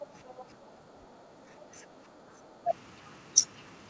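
From 0.0 to 0.05 s, and again from 0.28 to 0.45 s, a faint second talker sits under the main speech, roughly 20 dB down in the first instance and somewhat lower in the second. This is the other side's voice leaking through: the far end was most likely played on a loudspeaker near the microphone, and echo cancellation failed to subtract all of it, leaving low-level fragments mixed into the near-end signal.

From 0.55 to 2.02 s the background is gated by the echo canceller. For about one and a half seconds the room tone sinks, by as much as about 8 dB at its deepest, then comes back up. The canceller's suppressor clamped the microphone gain hard while it judged loudspeaker output to be present, so the noise floor dips audibly rather than staying steady, and recovers once the suppression releases. Throughout, the audio carries nothing above 8 kHz, consistent with a G.722 call path at 64 kbps.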